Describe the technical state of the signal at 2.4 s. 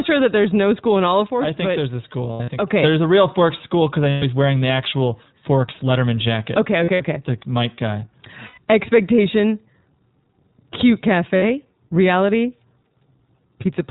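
At 2.4 s, packets are being dropped between 2.32 and 2.50 s. These are lost iLBC frames: about 120 ms of audio is missing, spread over roughly 160 ms, which fits six 20 ms frames. The longest unbroken gap is around 70 ms. The decoder fills each hole by repeating the last pitch cycle mixed with noise, so the sound smears into a held, buzzy, breathy vowel. It snaps back cleanly almost immediately, because each frame decodes independently.

The whole signal is also coded with the iLBC codec, and its damage is plainly audible. The sound points to the 15.2 kbps mode with 20 ms frames. The codec is narrowband, so nothing above 4 kHz survives, and the speech is clear but rough and slightly synthetic, with each frame's excitation coded on its own. That rough, band-limited texture also colours the concealed stretch at this moment.

The level here is also affected. From 1.27 to 2.71 s the sound and its background noise sit together about 5 dB lower, a sudden gain jump. 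It drops at 1.27 s and returns at 2.71 s with no fade in either direction. This is likely a digital gain setting applied without a ramp, so the level moves in a single sample step and can leave a click at each edge.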